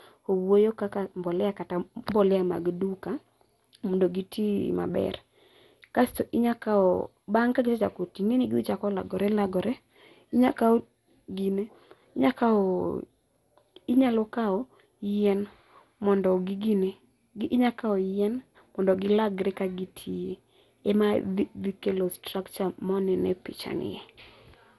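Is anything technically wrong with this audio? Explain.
Yes. Throughout the speech there is generation loss: the audio sounds swirly, smeared and hollow, with blurred consonant attacks and nothing above 11.8 kHz. It was likely re-encoded around seven times with MP2 at a rate near 96 kbit/s, each pass re-quantising on a shifted frame grid so noise and spectral holes pile up. A spectrogram shows a hard ceiling at 11.8 kHz, patchy gaps, and smeared onsets.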